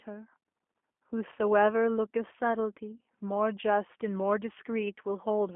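From start to finish, the speech carries plainly audible G.729 codec damage. The band runs only from 250 Hz to 3.4 kHz. Each 10 ms frame is rebuilt from a filter, pitch and sparse pulses. It sounds rough and synthetic, fitting G.729A at 8 kbit/s.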